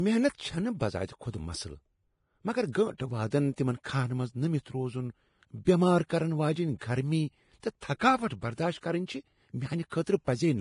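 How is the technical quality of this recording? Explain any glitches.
The speech is heavily degraded by lossy coding throughout, with three brief pre-echo smears.

Vorbis compression, throughout: nothing is present above 10.5 kHz, and the remaining treble is hissy and grainy, with roughened tones. This is likely Vorbis at a low bitrate, around 30 kbps, where upper detail is quantised so coarsely that it turns into noise-like fuzz.

Pre-echo, at 2.98 to 3.00 s just before "واد تِمن كھاہن منز", at 3.84 s between "واد تِمن" and "كھاہن منز نمِتھ روزٗن", and at 9.90 to 9.92 s: a short hiss, about 17 to 24 ms long, runs ahead of each sharp onset. The transform block spreads noise meant for the loud attack back into the quiet gap before it, softening the attack.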